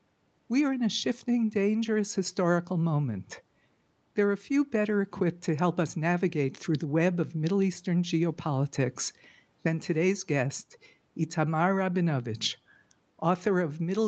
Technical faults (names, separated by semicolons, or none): none